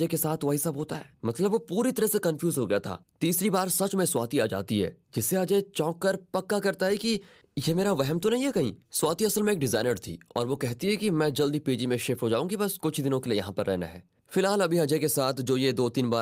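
No technical faults can be heard anywhere in the speech. There is nothing here that needs a time marker or further comment.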